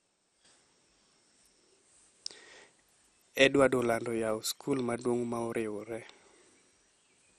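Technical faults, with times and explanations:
Throughout, MP2 compression, likely: dull, heavy gurgling and granular distortion, nothing above 13.8 kHz, as starved sub-bands flicker off or quantise coarsely, fitting about 56 kbps.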